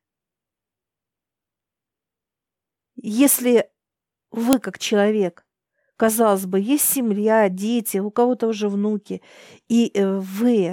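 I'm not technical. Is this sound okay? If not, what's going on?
No. File header played as audio at 4.53 s: a sharp click just before "как человек казалось бы", where a joined piece's setup bytes were played as sound.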